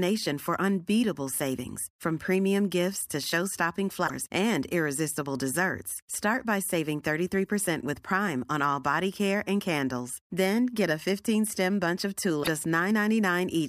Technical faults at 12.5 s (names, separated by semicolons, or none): damaged data in a compressed stream